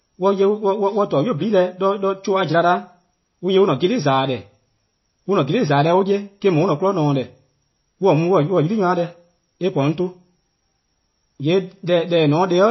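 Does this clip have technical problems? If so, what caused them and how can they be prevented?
Yes. Throughout, the speech sounds watery and swirly with nothing above 5.8 kHz, likely from MP3 compression starved of bits, which fits about 24 kbps. Encoding at a higher bitrate, or keeping a lossless copy, would prevent it.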